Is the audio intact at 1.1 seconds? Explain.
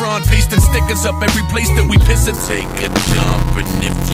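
Yes, at 1.1 seconds the audio plays through cleanly, with no dropout, click, distortion or other fault to be heard.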